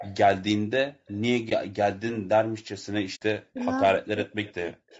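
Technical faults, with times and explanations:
Throughout: low-delay AAC compression. The speech sounds rough and grainy, with noise filling the gaps between pitch harmonics. This is likely AAC-ELD at about 32 kbps, whose low bitrate leaves too few bits to code the spectrum cleanly. Unlike a dropout, the damage is continuous rather than confined to moments.
0.00–0.16 s, 1.06–1.21 s, 3.55–3.65 s, 4.43–4.53 s, 4.89–5.00 s: echo leak. A faint copy of the speech trails it by 155 ms. It is moderately quiet at the start, barely audible around 1.1 s, and faint in the later scraps. This is likely a far-end echo canceller letting some of its loudspeaker's sound back into the call. The fixed delay distinguishes it from reverberation.
1.49–1.52 s and 3.15–3.22 s: AAC frame loss with muting. The sound fades out and back in over a short, soft-edged hole. The first gap fits one lost frame of about 20 ms, and the second is about 60 ms. 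The decoder zeroed the missing spectrum, so the result is silence rather than a repeated or smeared sound.
3.39–3.59 s and 3.80–4.32 s: speech suppressed in double talk. The talker's level plunges, at its deepest nearly to silence, for about 0.2 s and then about 0.4 s. This is likely an echo canceller confused by both sides speaking at once.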